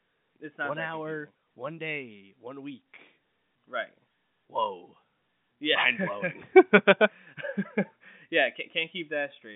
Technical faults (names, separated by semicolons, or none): none